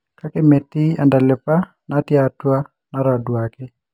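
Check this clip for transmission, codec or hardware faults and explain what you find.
One fault, running through the whole speech clip: imaging from linear upsampling. The rate was raised by straight-line interpolation, which fits a 12 kHz to 48 kHz conversion. That weak filter leaves a faint mirrored band at 6–12 kHz, roughly 45 dB down, heard as a slight metallic shimmer on sibilants, with the top end dulled.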